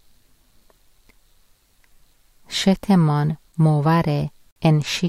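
Speech, with a gap between stream segments from 4.51 to 4.56 s: about 50 ms of hard-edged silence where two segments' timestamps fail to meet. Unlike a dropout, nothing is lost. The sound resumes intact, merely delayed, so the clip runs slightly longer.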